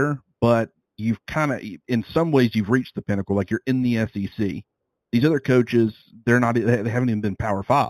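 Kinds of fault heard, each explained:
Imaging from linear upsampling: throughout, straight-line interpolation from 8 kHz to 48 kHz leaves a faint mirrored band at 4 to 8 kHz, about 30 dB down.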